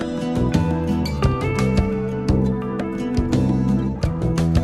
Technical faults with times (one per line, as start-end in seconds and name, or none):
none